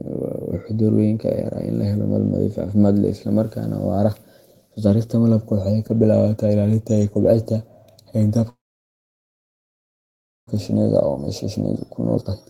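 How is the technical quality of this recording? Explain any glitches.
The recording has two clear glitches near the end, a call audio freeze followed by jitter buffer speed-up.

From 8.49 to 10.49 s there is a call audio freeze. The last sound trails off briefly, then nearly two seconds go silent. Speech resumes where it stopped, with nothing lost. The likely cause is delayed packets draining the jitter buffer.

Jitter buffer speed-up follows twice. From 10.69 to 11.74 s the speech runs about 6% fast, and from 12.16 s to the end about 48% fast, sounding clearly hurried. Pitch stays the same. The receiver trims short pitch-period slices to cut the built-up delay.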